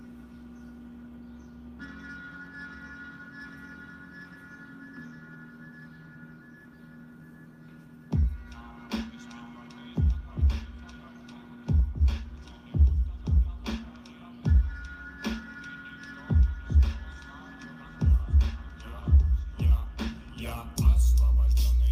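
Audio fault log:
No faults detected; nothing to log.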